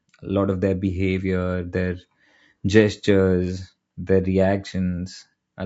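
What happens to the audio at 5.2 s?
At 5.2 s the speech carries the same plainly audible low-delay AAC compression heard across the whole clip: a rough, grainy texture with noise filling the gaps between harmonics and a dulled, somewhat synthetic top band. The likely cause is AAC-ELD at a rate consistent with about 32 kbps, whose very short frames resolve pitch harmonics coarsely. Unlike packet loss, nothing drops out or stutters; the graininess is continuous rather than a sudden break.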